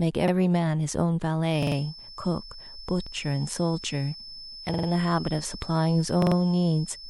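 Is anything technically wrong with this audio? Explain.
Yes, there are two faults.

Repeated buffer: at 0.28 s and 3.07 s a short slice of the speech plays twice, and at 1.63 s, 4.74 s and 6.22 s a slice plays four times in a row. The result is a quick stutter with a hard join at each repeat, lasting about 0.05 s for the doubles and 0.14 s for the longer ones. New audio arrived late, so the device replayed its last block. Each repeat is about 46 ms, which fits a 2048-sample buffer. The stutter delays the speech rather than dropping any of it.

Feedback whistle: from 1.47 s to the end, a thin, steady tone at 5.3 kHz sits behind the speech, about 20 dB below it and swelling and fading slowly in level. The likely cause is a loudspeaker-to-microphone loop poised right at the edge of feedback. That single frequency keeps recirculating and sustaining itself, but it never builds into a runaway howl.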